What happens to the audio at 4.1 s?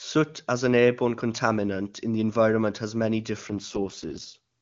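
At 4.1 s the speech is inside an AMR rate drop, running from 3.49 to 4.38 s, just after "the environment has many". The codec falls to a much lower rate, so the bandwidth holds with no gap while the voice turns rough and raspy, consistent with the 6.6 kbit/s mode.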